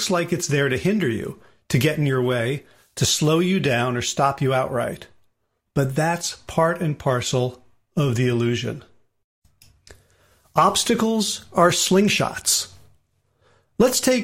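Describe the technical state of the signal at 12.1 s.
At 12.1 s the speech signal is intact, with no audible technical fault at that point.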